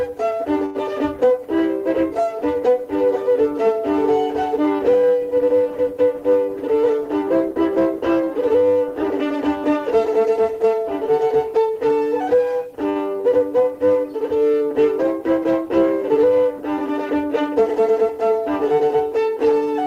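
Short stall from a late packet at 0.65 to 0.77 s: a packet arrived after it was due, so the jitter buffer ran dry and the receiver held the last sound for 92 ms until the data came in, then carried on from the same point. Nothing is lost, but the sound sits frozen for a moment with a faint buzzy, dipping quality, and the delay grows by 92 ms. The same happens at 12.89 to 12.97 s, with a 60 ms hold.

Jitter buffer speed-up at 6.48 to 7.94 s: the buffer holds more audio than its target, so the receiver trims it back by cutting many tiny pitch-period-length slices in quick succession. The result plays about 6% fast at unchanged pitch, shedding roughly a tenth of a second and sounding slightly rushed. A second speed-up at 17.41 to 18.19 s runs about 8% fast and removes somewhat less.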